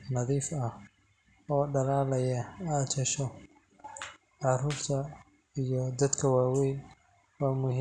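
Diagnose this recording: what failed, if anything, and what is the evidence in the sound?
Nothing failed; no stage in the chain shows trouble.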